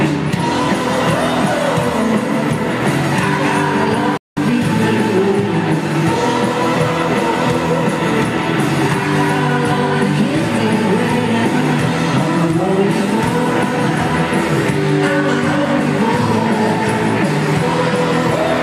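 The audio has a digital broadcast dropout from 4.17 to 4.37 s. The sound fades out within 3 ms and goes silent for about 0.19 s, then resumes further along. The receiver muted over corrupted or missing frames, which fits roughly six lost frames.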